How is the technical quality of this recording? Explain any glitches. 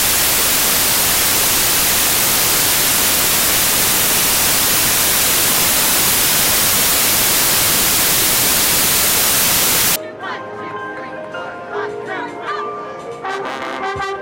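Rough going for the first ten seconds or so. From 0.0 to about 9.96 s you've got samples built from the wrong bytes. The reader is pairing or ordering each sample's bytes incorrectly, so the jittery low bits end up dominating. That's why it's a loud, harsh noise wash, close to white on loud sounds.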